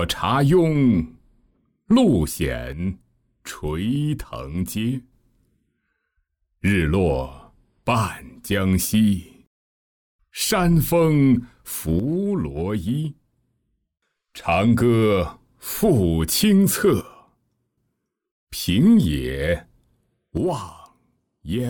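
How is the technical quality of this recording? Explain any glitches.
The recording has repeated level drops at 2.7–5.1 s, 12.0–14.4 s, 17.0–18.2 s and 20.4–21.7 s. Each time the sound abruptly falls about 6 dB, consistent with one channel dropping out, likely a lost stereo channel in the mono sum.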